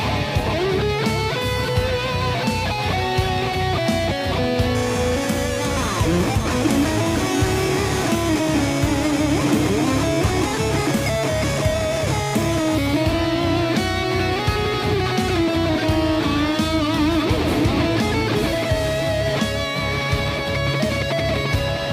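Periodic clock jitter from 4.75 to 12.75 s: interference near 3 kHz wobbles the converter clock, adding sidebands that give the audio a rough, metallic edge.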